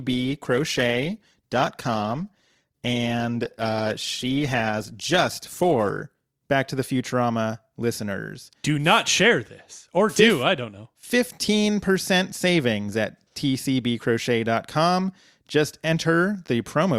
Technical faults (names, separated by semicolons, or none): adaptive stream starting at a low bitrate